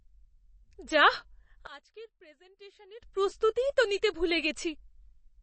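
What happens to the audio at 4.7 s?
At 4.7 s the speech carries the same damage heard across the whole clip, which is likely MP3 compression. The sound is plainly watery and swirly, and nothing is left above 8.3 kHz, which fits a low bitrate near 32 kbps. With so few bits, the encoder drops weak frequency lines that flicker on and off from frame to frame. A simple low-pass filter would remove the treble just as cleanly, but it would not add that shifting, warbling texture.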